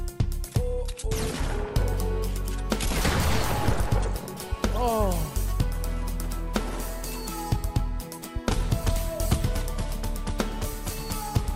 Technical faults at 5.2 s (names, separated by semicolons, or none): none